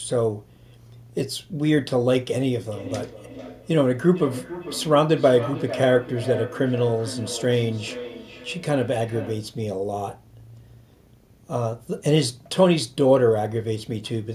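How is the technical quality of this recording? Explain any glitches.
There's one real problem here. From 2.66 to 9.6 s, feedback echo between two devices: a second device replays the speech into the mic, so each phrase returns roughly every 400 ms, thin and ringing, peaking about 13 dB below the voice.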